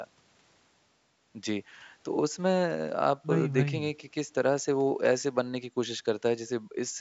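The speech carries no technical faults, showing only the expected shaping of call microphone processing, with the lowest bass trimmed and nothing above 8 kHz.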